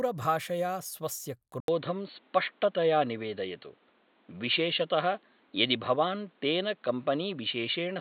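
At 1.6 s the speech drops out for about 80 ms, then comes back dull and boxy for the rest of the clip, with nothing above 4.4 kHz, a level about 5 dB different and a faint new noise floor. That's likely the input switched to a poorer device mid-recording.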